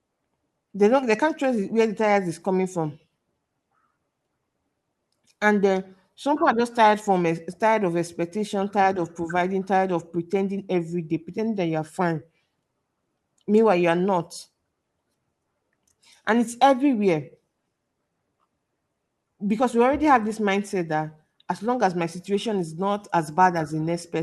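No technical fault can be heard anywhere in the recording; the signal stays steady and intact throughout.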